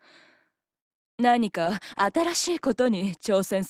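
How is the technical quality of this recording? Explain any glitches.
The recording has four network-related faults, all in the first half and carrying through to the end.

Call audio freeze, 0.79 to 0.92 s: the sound stops and 110 ms of silence is inserted. The likely cause is delayed packets draining the jitter buffer. When audio resumes it continues from where it stopped, so nothing is lost, but the timeline shifts by 110 ms.

Skip ahead, 0.98 to 1.01 s: playback jumps forward with almost no gap, dropping roughly 70 ms of audio. That stretch was dropped while later material had already queued up, which recovers some of the added delay. The two sides are joined almost directly, so the jump sounds like a small abrupt cut.

Jitter buffer slow-down, 1.21 to 2.19 s: the receiver rebuilt its reserve by repeating short pitch periods and pause fragments, adding 60 ms. The audio plays at about 94% speed with unchanged pitch, so sounds are slightly drawn out.

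Call bitrate drop, 1.67 s to the end: the bandwidth estimate fell and the encoder went from 96 kbps to 13 kbps, staying at the lowest rate for about 1.2 s. At that rate coding becomes coarse and high frequencies are removed, leaving a muffled, rough, somewhat watery sound.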